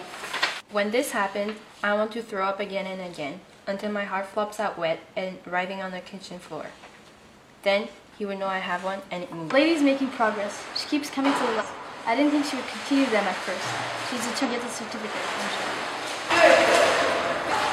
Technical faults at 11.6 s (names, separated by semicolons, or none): damaged data in a compressed stream